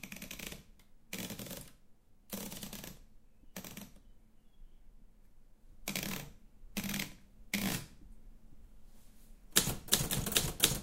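No technical faults can be heard anywhere in this recording of sounds. There is nothing to mark at any point along its timeline.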